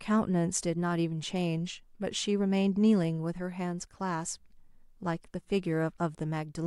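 No technical faults can be heard anywhere in the recording; the speech signal stays steady and intact throughout.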